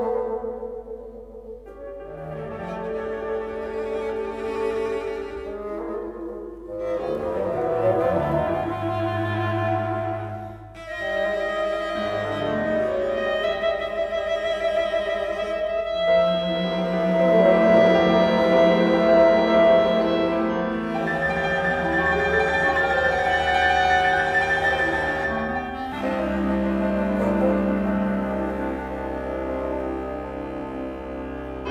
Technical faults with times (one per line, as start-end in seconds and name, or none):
none